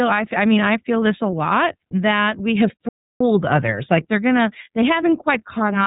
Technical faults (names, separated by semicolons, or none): iLBC codec; playback stall